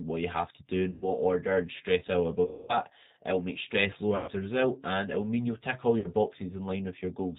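Throughout, the speech carries plainly audible G.729 codec damage at 8 kbit/s. The voice is rebuilt from a vocal tract filter, a pitch predictor and sparse pulses, so it sounds rough and synthetic, with nothing above 4 kHz.

VoIP packet loss concealed by the speech codec occurs four times:
0.90 to 1.13 s, after "you have to do" (120 ms lost);
2.45 to 2.82 s (240 ms);
4.16 to 4.31 s, after "make stress" (120 ms);
5.99 to 6.08 s, after "mean you'll tick all" (40 ms).

Each gap is filled by extrapolating the last pitch and filter into a fading buzzy tone or coloured noise. The voice stays weak briefly after each one.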